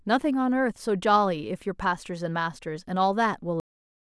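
At 3.6 s the speech stops mid-sound in a cut-off end. The final stretch of audio was never written or played out, so the sound falls straight to digital silence. There is no natural decay. The last 0.47 s is empty.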